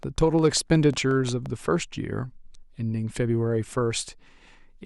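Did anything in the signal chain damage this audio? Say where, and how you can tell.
Yes. A train of clicks runs from 0.03 to 1.47 s: about ten sharp, near-identical ticks at a steady 5.6 per second, peaking about 5 dB above the speech and audible in the gaps as well. Such evenly spaced, uniform pulses riding on the speech point to the analogue wiring stage, most likely interference from nearby equipment coupling into the cable or input and injecting a pulse each cycle, rather than anything in the recorded sound.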